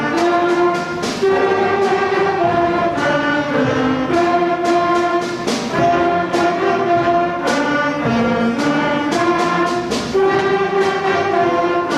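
Nothing stood out on listening to this audio.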